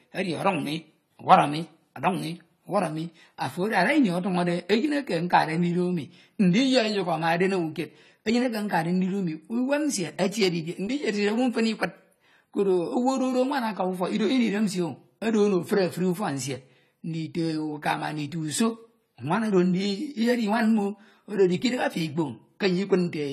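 From start to finish the speech carries plainly audible AAC compression artefacts, likely from AAC-LC squeezed hard enough to fit a low bitrate around 32 kbps. Nothing survives above 14 kHz, and the quantised spectrum gives the whole clip a clearly processed, coarse texture.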